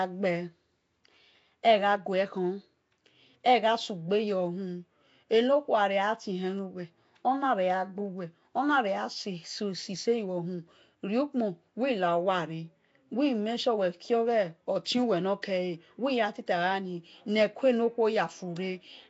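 From the start to the end, the speech carries plainly audible codec damage, most likely Nellymoser compression, the old Flash microphone codec. It codes short blocks at a fixed, low bit allowance, so weaker bands get no bits and are filled with noise. That gives the audio a rough, hissy halo and a smeared, underwater quality. Nothing is present above 7.7 kHz, and the overall damage fits a stream of around 32 kbps.

At 15.42 s there is a pre-echo lasting about 11 ms. A sharp attack falls late in a transform block, and the quantisation noise, spread evenly across that block and sized for the loud part, spills into the quiet moment just before the attack. It is heard as a brief hiss leading into the onset, which sounds soft and smeared rather than crisp.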